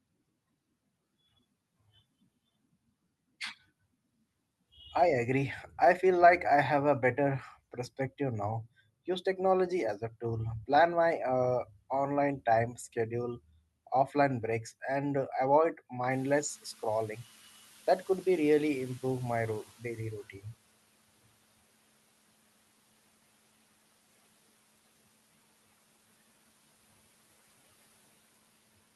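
A sudden swell of background noise in this speech recording at about 16 s comes through with less reduction at first, then sinks steadily until it settles at 20.26 s. This is the noise suppressor catching up. The room noise jumped by about 22 dB, and the suppressor's noise estimate lagged behind. It needed about 4.2 s, from 16.1 s onward, to adapt and pull the noise down by about 11 dB. The audio's top end stops near 12 kHz from the call codec.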